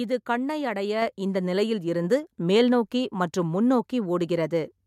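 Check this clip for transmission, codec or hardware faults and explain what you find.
There's one fault here, a microphone volume stepped up, right at about 1.02 s, between "இது கண்ணை அடைய" and "இந்த நிலையில்". The call software seems to have decided the mic was running quiet and bumped the device's input volume in a single jump, about 4 dB. Because the change happens at the input, the speech and the background noise both get louder together at that instant, so you hear a sudden step up in overall level rather than a gradual swell.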